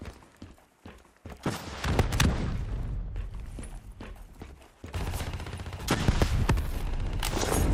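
At 6.47 s there is a small forward skip of a few milliseconds, likely a dropped buffer (overrun), where unread samples were overwritten and both sides spliced together.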